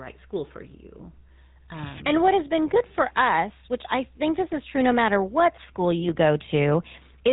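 A buzzy, gravelly roughness runs through the whole speech clip, with nothing above 3.8 kHz: GSM full-rate codec damage, with the excitation sparsely pulsed at a rate which fits 13 kbps.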